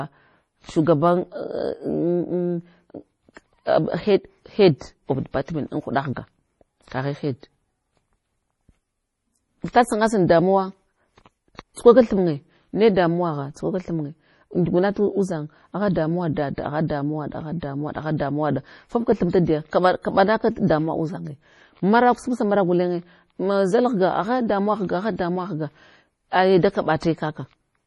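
Throughout this speech recording the sound is watery and swirly, with metallic chirps on s sounds and nothing above 11.5 kHz. This is likely heavy MP3 compression at a very low bitrate, around 32 kbps, where the encoder drops the treble and weak frequency lines flicker between frames. At 9.72 s, just before "sangasal damuwa", and from 11.56 to 11.59 s, just before "tsukwaka thinye ne", a short hiss precedes sharp onsets, softening them. This is pre-echo: quantisation noise sized for each loud attack spreads across the whole transform block into the quiet moment before it, about 19 ms and 33 ms here.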